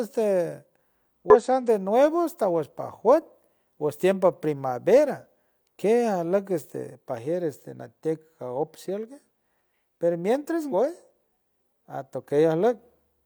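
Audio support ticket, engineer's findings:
Damaged data in compressed stream at 1.30–1.36 s and 10.69–10.74 s (after "per mientras"): short speech blips, decoder misreading corrupted frames and resyncing to next header.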